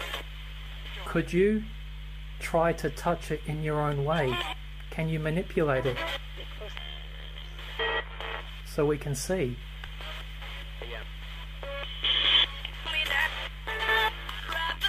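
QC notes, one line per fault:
Throughout, mains hum: a steady 50 Hz tone with low harmonics, fairly loud against the sound, from ground-loop or transformer pickup; a constant horizontal line on the spectrogram.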